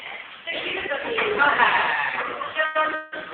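At 2.65 s there's a short stall from a late packet: the last bit of sound gets held for about 96 ms, with a faint buzzy, slightly dipped quality, until 2.77 s. The jitter buffer ran dry, and playback picked up exactly where it left off, so nothing's lost; it's just pushed about 96 ms later.

Then from 2.95 to 3.14 s there's a call audio freeze. The sound smears into a fading buzz for about 170 ms without ever dropping to silence, then carries on unchanged, ending up a further 170 ms behind. The likely cause is packets held up in transit.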